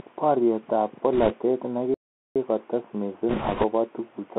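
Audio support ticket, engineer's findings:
Bluetooth CVSD headset codec, whole clip. Speech confined to roughly 250 Hz to 3.4 kHz, no content above. Granular hiss under the speech, rough sibilants, which fits a 64 kbps CVSD link. One-bit delta modulation with adaptive step size, plainly audible degradation.

Bit errors on a Bluetooth voice link, 1.13–1.35 s and 3.29–3.65 s. Rushing, crackly noise over the speech with no hard clicks. Heavier in the second burst. Error rate around 3 percent, then around 5 percent. Flipped CVSD bits carry little weight each and decay, so damage stays diffuse.

Playback stall, 1.94–2.36 s. Output drops to silence mid-flow for about 0.41 s, then speech resumes. Likely cause is the player's buffer running dry or its audio thread being blocked until data delivery recovered.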